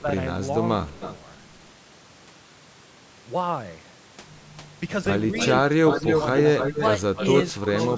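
A speech recording with call-style band limiting, nothing above 8 kHz, and two recurring faults. Speech suppressed in double talk appears in three short dips: 0.02 to 0.09 s and 5.29 to 5.34 s, each about 5 dB down, and a deeper one of about 10 dB from 7.53 to 7.71 s. The likely cause is an echo canceller that could not tell the near talker from loudspeaker echo while both sides were active, so it pulled everything down. On a waveform these show as brief notches in the envelope. On a spectrogram they appear as short vertical bands where energy fades across the spectrum. Echo leak follows at 0.89 to 1.13 s as a faint copy delayed by 178 ms, about 15 dB below the speech. It then returns with a 292 ms delay at 5.35 to 5.47 s, 5.88 to 6.22 s, 6.58 to 6.87 s and 7.16 s to the end. Those later copies sit at about 10, 0, 5 and 10 dB below the speech, so the one around 6 s is as loud as the speech itself. 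This is likely residual loudspeaker pickup that the far side's canceller let through. On a spectrogram it shows as ghosted harmonic patterns shifted right of the originals by that fixed delay. In the waveform, the gaps between syllables fill in.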